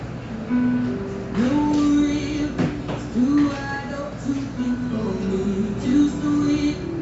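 Nothing stood out on listening to these sounds, which carry the usual call-path character with no content above about 8 kHz.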